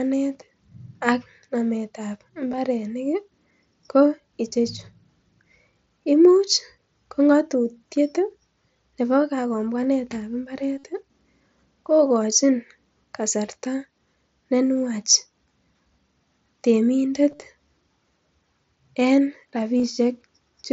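Concealed Bluetooth headset packet loss occurs four times, at 2.52–2.58 s just after "ak namet ab", 10.79–10.84 s after "nebo kagombwanet ab", 17.31–17.40 s, and 19.78–19.84 s. Lost headset packets were filled by repeating recent waveform, which sounds like a brief buzzy, held tone. On a spectrogram this shows as frozen horizontal harmonic stripes, and on the waveform as repeated identical cycles at constant level, with a small warble where real audio resumes. This applies to the 45 ms run near 17.3 s.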